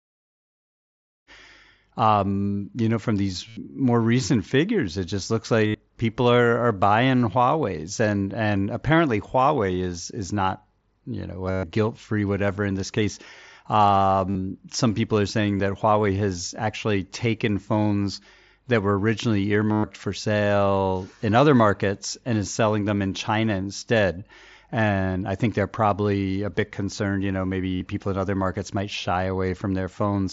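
Speech over a wideband headset link with a light grainy mSBC character, faded in around 1.3 to 1.5 s, shows concealed Bluetooth headset packet loss at 3.48, 5.67, 11.51, 14.30, 15.58, 19.71, 23.80 and 27.76 s. The receiver repeats recent waveform through each gap. The longest gaps, about 120 ms, buzz before the audio resumes, as at 11.51 and 19.71 s.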